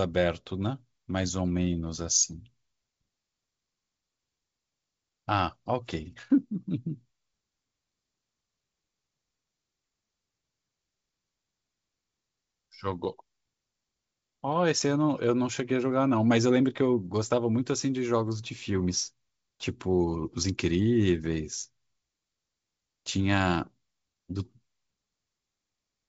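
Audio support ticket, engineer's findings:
No audible faults found.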